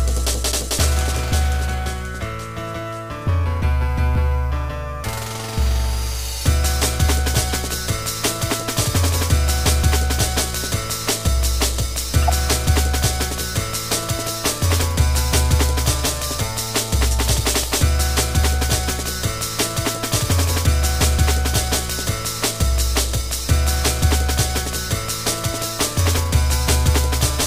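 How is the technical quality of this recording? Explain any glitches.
Three short glitches mar the recording, all of the same kind: a corrupt frame decoded, at 7.49 to 7.52 s, 12.22 to 12.28 s, and 20.66 s. Each time, damaged compressed data was played as though valid, scattering energy into the wrong frequencies for a frame or a few. The result is a brief chirp or noise blip peaking around -20 to -15 dBFS, seen as a vertical smear on a spectrogram and a jagged spike in the waveform.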